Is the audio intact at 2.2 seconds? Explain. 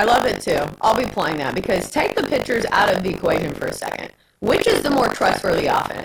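No. At 2.2 seconds the speech carries buffer tearing, which runs through the whole clip. The writing program and the playback hardware have drifted so their positions cross inside each buffer period, leaving roughly a fifth of every buffer filled with audio from about 70 ms earlier, joined hard on both edges. That repeats at 50 Hz, a steady robotic buzz riding on the voice. Unlike an underrun, there are no silent gaps, only the rattle tied to the signal.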